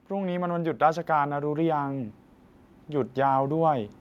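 Speech, with automatic gain rising from 0.08 to 2.15 s. The automatic gain control judged the input too quiet and raised its gain by about 6 dB over roughly two seconds, so the voice and the room background swell together. That shared rise marks it as gain and not a talker leaning in, which would lift only the voice. The slow, steady climb also sets it apart from compressor pumping, which moves quickly with each syllable.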